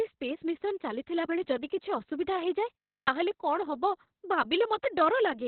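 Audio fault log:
Throughout: Opus voice compression. The speech is muffled and hoarse, with a slightly robotic buzz, and nothing reaches above about 4.3 kHz. That narrowband cutoff points to the SILK speech coder running at a very low bitrate, roughly 6 kbps, with long 60 ms frames. At that rate the coder discards the upper band and describes the vocal excitation only coarsely, so consonants lose their edge and voiced sounds turn rough.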